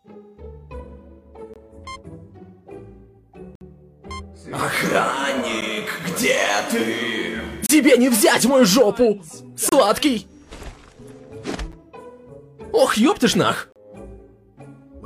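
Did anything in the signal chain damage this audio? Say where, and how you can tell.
Yes, at playback: a gap between stream segments recurs every 2 s, at 1.54–1.56, 3.55–3.61, 5.61, 7.66–7.69, 9.69–9.72, 11.72 and 13.72–13.76 s. Segment timestamps leave small holes that the player fills with hard-edged silence lasting 8 to 57 ms. No audio is lost.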